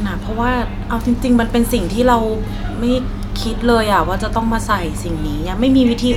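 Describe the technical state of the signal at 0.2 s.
At 0.2 s the speech signal is intact, with no audible fault at that moment.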